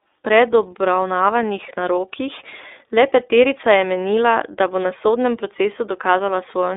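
Speech throughout carries plainly audible iLBC codec roughness within 300 Hz–3.7 kHz; the synthetic grain, absent from plain band-limiting, fits independently coded 30 ms frames.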